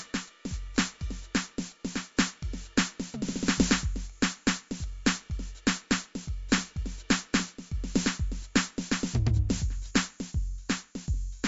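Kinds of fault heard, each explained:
MP3 compression, throughout: the music has nothing above 7.6 kHz and a plainly audible watery, swirling texture. This is likely an MP3 encoder starved of bits, which fits a rate near 48 kbps, cutting the treble and letting weak frequency components flicker from frame to frame.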